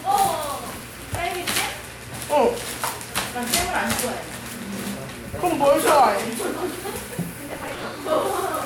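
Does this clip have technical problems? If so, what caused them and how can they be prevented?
Yes. Processor overload crackle at 0.64–0.82 s and 7.48–7.84 s: the processor missed many buffer deadlines in a row, each skipped chunk of a few milliseconds leaving a hard-edged gap, so the sound tears into gritty crackle. Larger buffers or lighter processing load prevent it.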